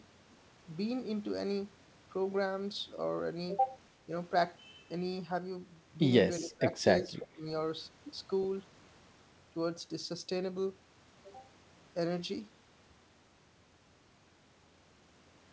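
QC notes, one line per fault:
4.06–4.1 s, 6.4–6.75 s and 7.02–7.46 s, speech suppressed in double talk: the level ducks in three places, getting worse each time. It's a quick dip of about 5 dB at 4.06, then roughly 15 dB down at 6.4, and about 25 dB at its deepest from 7.02. The last two each chew through around a third of a second. The likely cause is the echo canceller getting confused while both ends talked at once and turning its own talker down along with the echo.
7.0–7.04 s and 7.2–7.26 s, echo leak: two short, faint scraps of a delayed copy of the speech come through. They sit 345 ms behind the original at about 20 dB under it, overlapping the ducked stretch. The likely cause is a loudspeaker at one end whose canceller didn't fully scrub what its mic picked up, so the leftover got sent back. Like the rest of the audio, it has nothing above 8 kHz, which fits the G.722 call path.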